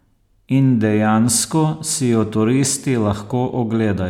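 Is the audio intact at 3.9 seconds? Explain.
Yes, at 3.9 seconds the speech plays through intact, with no dropout, click or other fault audible at that moment.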